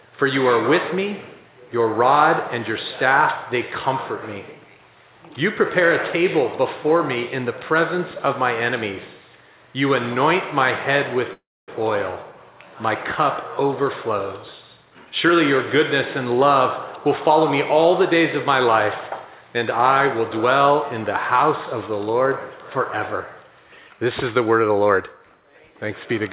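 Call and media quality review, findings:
Brief fading buzz then about 250 ms of silence, 11.33–11.69 s, audio resuming where it stopped with nothing lost; call audio freeze, likely jitter buffer underrun from delayed packets, adding 348 ms of delay.

Hurried playback at unchanged pitch, 14.77–15.79 s (121% speed, roughly 200 ms cut), then milder at 17.06–18.13 s (104%) and 19.41–20.49 s (105%), roughly 50 ms each. Jitter buffer speed-up draining the backlog by removing pitch-period slices. Band limit at 4 kHz fits a 64 kbps G.711 A-law path.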